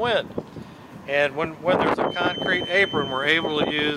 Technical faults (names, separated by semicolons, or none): feedback whistle